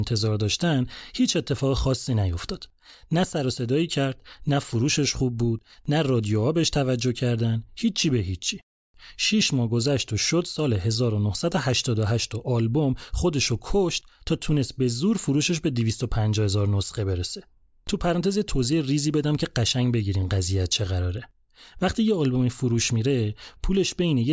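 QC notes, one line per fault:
No faults heard in the speech. Nothing needs a time mark.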